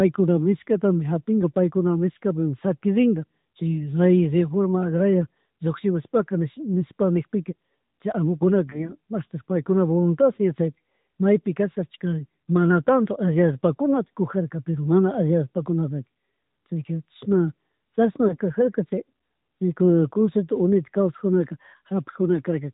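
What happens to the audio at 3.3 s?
At 3.3 s the speech carries AMR narrowband mobile codec damage, present throughout: nothing above 4 kHz survives, and the vocal-tract model yields a buzzy, synthetic tone consistent with the 10.2 kbps mode.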